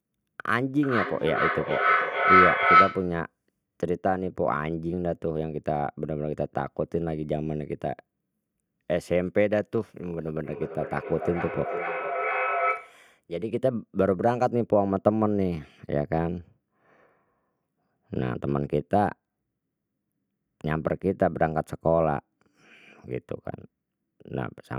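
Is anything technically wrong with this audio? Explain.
Yes. Feedback howl, 0.83 to 3.20 s: two devices share one room and the mic-to-speaker loop gains level each pass, building a tone around 1.5 kHz that pulses roughly every 0.4 s and peaks about 6 dB above the speech.

Feedback echo between two devices, 10.44 to 13.07 s: one device replays the other's microphone, which recaptures it, so speech returns roughly every 0.4 s, thinner and ringing, reaching about 4 dB below the speech.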